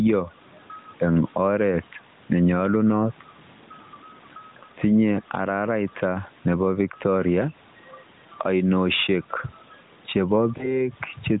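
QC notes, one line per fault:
throughout, gain pumping: loud and soft parts end up closer in level, with a level swing of around 10 dB. The likely cause is input gain set far too high, with a fast limiter or compressor clamping every peak and squashing the dynamics.
10.58 to 10.81 s, lost AMR speech frames: a short dip or warble in the speech, then a weak or rough recovery. This fits a single 20 ms frame failing its check, so the decoder briefly repeated its last good pitch and vocal-tract settings at reduced gain.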